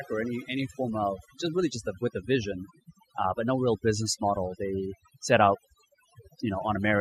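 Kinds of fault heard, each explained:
Overdone noise removal: a noise reduction process set too aggressively on a noisy speech recording, running for the full length of the clip. Frequency bands that sit close to the tool's noise estimate are pulled down hard or cut out entirely, and the quieter components of the voice are removed along with the noise. Between phrases the background drops and breaks up into twinkling, chirpy specks.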